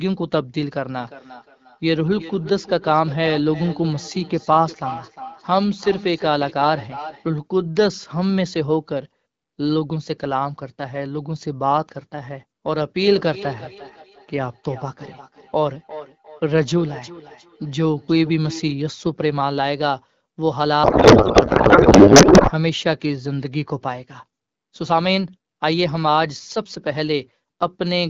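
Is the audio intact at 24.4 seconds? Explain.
Yes, the audio is intact at 24.4 seconds, with no fault at that moment.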